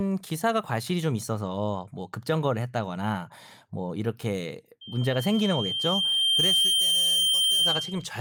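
From 4.81 s to 8.09 s, loudspeaker feedback squeal: a steady 3.2 kHz tone swells over roughly two seconds to about 5 dB above the speech, unlike broadband hiss or hum.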